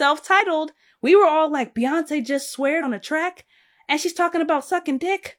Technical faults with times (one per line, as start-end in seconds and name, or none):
0.36-0.42 damaged data in a compressed stream
2.79-2.84 damaged data in a compressed stream